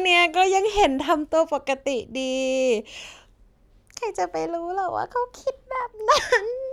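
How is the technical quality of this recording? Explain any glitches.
The technical quality of this recording holds up, with no glitches to explain.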